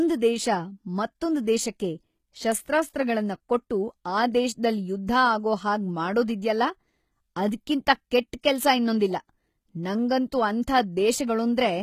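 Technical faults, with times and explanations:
Throughout, HE-AAC compression: the speech has plainly audible coding damage, with nothing above 14.9 kHz, and the top octave sounds bright but synthetic, so s sounds come out gritty and lispy. The likely cause is HE-AAC at a rate that fits roughly 20 kbps. The codec keeps only the lower spectrum and rebuilds the treble by copying lower bands upward under a coarse envelope, so the upper harmonics no longer line up with the ones below.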